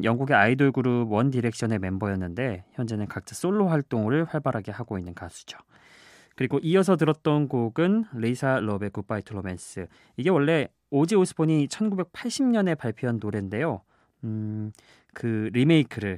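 No technical faults can be heard anywhere in this speech recording. Nothing in the sound points to a problem with how it was captured, processed or played back.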